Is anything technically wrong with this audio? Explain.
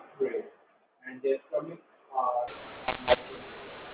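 Yes. From 2.48 s, right after "gray and their stomachs", to the end, the speech turns harsh and grainy, loudness jumps unevenly and pauses fill with hiss. This is mu-law and A-law mixed up: A-law telephone samples decoded as mu-law, scrambling levels and lifting near-silent samples into noise.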